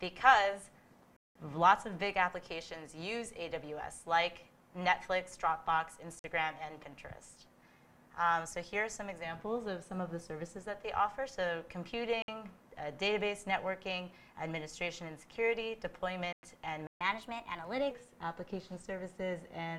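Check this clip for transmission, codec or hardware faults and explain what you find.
There are three related faults here, all dropouts and a speed-up afterwards.

The Bluetooth stall shows up four times: 1.17 to 1.36 s (about 190 ms), 6.19 to 6.24 s, 12.22 to 12.28 s, and 16.33 to 16.43 s. The sound cuts to silence and resumes, likely because interference delayed packets and the headphone buffer ran dry.

A playback stall follows at 16.87 to 17.01 s, about 136 ms of silence mid-flow, likely the player starving for data or its thread getting blocked before it recovers.

Then there's catch-up at higher speed from 17.01 to 17.91 s. The player burns through its backlog at 1.15x, so the sound runs fast and about two semitones sharp before settling back to normal.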